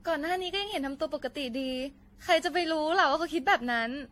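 From start to finish the speech carries a swirling, hollow texture, with consonant attacks smeared and a gritty noise bed sitting under every phrase. Nothing is heard above 16.5 kHz. What sets this apart from a single low-bitrate encode is that the smearing and spectral holes run deeper than that bandwidth would suggest, which points to generation loss, likely from around seven passes through AAC-LC at about 64 kbit/s, each requantising on a shifted frame grid.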